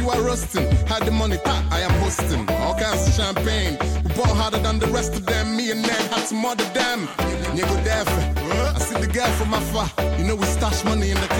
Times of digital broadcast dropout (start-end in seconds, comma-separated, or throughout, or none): none